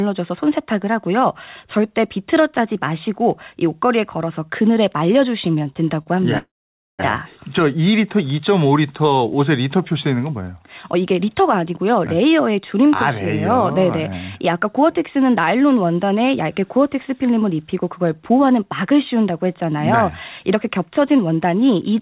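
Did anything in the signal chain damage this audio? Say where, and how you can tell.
Yes. Repeated stalls (stutter) at the network and jitter-buffer stage, 5.52 to 6.08 s: five brief holds, the longest 38 ms and about 78 ms in total, each bridged by stretching the last sound. Nothing is skipped, so it drags rather than clipping syllables as packet loss would.

A call audio freeze follows from 6.38 to 7.01 s. The last sound is carried on for 608 ms, fading to silence for about 510 ms of it, then the speech resumes exactly where it stopped. That points to a likely jitter-buffer underrun from held-up packets, not a dropout that discards audio.

A jitter buffer speed-up runs from 20.55 to 21.69 s. Around 70 ms of pitch-period slices are trimmed, so the speech plays at 106% with unchanged pitch. A resampling error would raise the pitch along with the tempo. The narrowband call path, with nothing above 4 kHz, sits underneath throughout.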